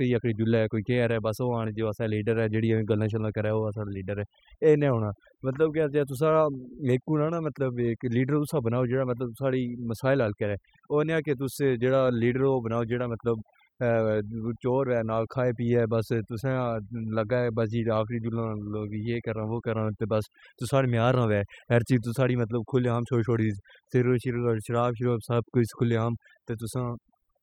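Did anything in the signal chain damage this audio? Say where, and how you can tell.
Yes: overdone noise removal at the call-processing stage, throughout. The background drops and breaks up into twinkling specks, because bands near the noise estimate were gated away.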